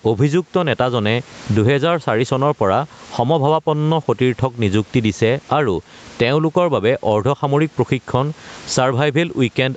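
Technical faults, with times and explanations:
throughout, gain pumping: gain swings by around 20 dB under loud speech, likely a fast limiter fighting excessive gain; steady room noise wouldn't breathe like this.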